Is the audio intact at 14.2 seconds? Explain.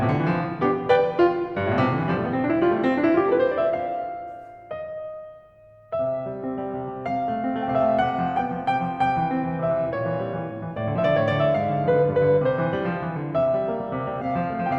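No. From 14.21 to 14.26 s the music shows compressed frames skipped: about two frames of encoded audio, roughly 40 ms, never play, so the music jumps forward, which fits a codec using 20 ms frames. Unlike a dropout, there is no silent gap. The music simply lurches ahead, missing a sliver of time.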